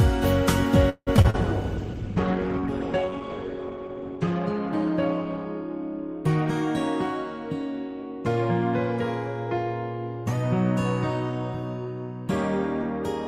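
From 0.89 to 1.36 s there is repeated packet loss, producing a robotic sound: four gaps in quick succession, the longest 172 ms, with about half the stretch concealed by extending the previous sound and 80 ms simply missing. The result is choppy and robotic.

A call bitrate drop follows from 1.78 to 7.00 s. The encoder's rate falls from 40 to 12 kbps and stays at its lowest for about 2.4 s. The coarser coding and trimmed high frequencies leave the audio rough, watery or muffled until the rate recovers.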